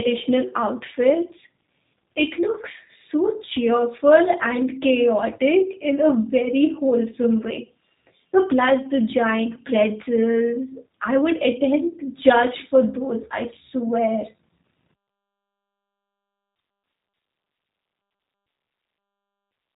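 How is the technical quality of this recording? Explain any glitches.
The recording has plainly audible codec damage throughout. For the whole clip, G.729 codec coding rebuilds the speech from a filter, pitch and sparse pulses. Nothing passes above 3.8 kHz, so the speech sounds muffled, slightly rough and synthetic. This fits an 8 kbit/s codec.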